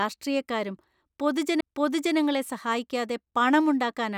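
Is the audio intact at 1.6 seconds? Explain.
No, a CD skip at 1.60 s: the laser jumps tracks, muting for roughly 15 ms, then the speech resumes abruptly from a different point on the disc.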